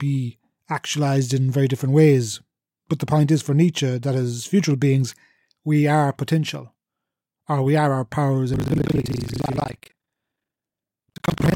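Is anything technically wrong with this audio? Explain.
Yes: buffer tearing from 8.52 s to the end, right after "we are our powers". The writer and reader of the playback ring buffer have slipped. Each period mixes current speech with roughly half its length of audio from about 150 ms earlier. This gives a robotic 25 Hz rattle, seen as hard waveform joins every 40 ms and vertical stripes on the spectrogram.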